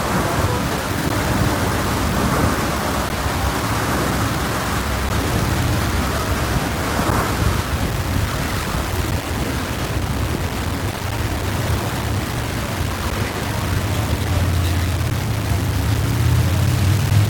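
The audio is heavily grainy from start to finish. The grit follows the signal. Quiet passages turn rough, and the softest parts sputter or fall silent. The distortion sits only about 10 dB below the sound itself. This is the signature of low bit depth without dither. The likely cause is rounding to very few levels with no dither. The harshness fits roughly 4-bit resolution. There are also periodic USB or driver dropouts. Brief gaps of silence, each around 10 ms long, cut into the sound. They come every 2.0 s, from 1.09 s to 17.11 s, about ten in all. Where there is sound, each one is heard as a tick or pop. The even spacing points to a background task that stalls the bus or driver at a fixed interval.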